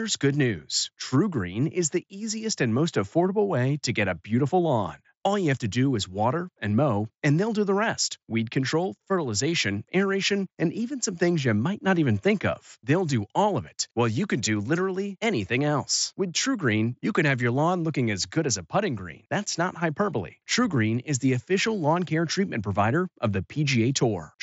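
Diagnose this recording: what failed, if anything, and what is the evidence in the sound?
Nothing in the recording has failed: the speech arrives through a Bluetooth mSBC headset link that is working as intended, with audio extending to about 7.7 kHz and nothing above it, the normal wideband ceiling of that path, and only the light graininess on louder passages that this codec leaves behind.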